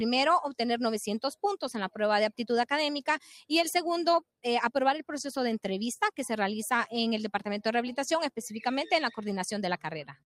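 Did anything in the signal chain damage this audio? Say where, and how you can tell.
No, nothing in the signal chain damaged this audio.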